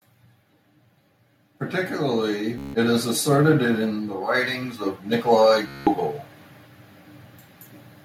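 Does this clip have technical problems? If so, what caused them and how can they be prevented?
Yes. Automatic gain rising: speech and background swell together by about 8 dB from 1.45 to 3.9 s, and about 6 dB from 4.47 to 6.07 s, as the automatic gain control raises its gain. Disabling automatic gain and setting a fixed input level prevents it.

Bluetooth stutter: a buzzing, machine-gun repeat at 2.58 to 2.75 s (about 160 ms) and 5.68 to 5.87 s (about 190 ms), where the receiver replays its last buffer for lost packets. Keeping the device close, clear of interference, or using a wired connection prevents it.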